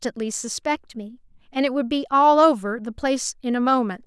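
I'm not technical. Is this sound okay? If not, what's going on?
No. Between 0.75 and 1.33 s, software keeping two clocks in sync likely sped playback up in one jump to balance its buffer, a drift correction step. The speech runs about 6% faster and sits a semitone higher, then snaps back.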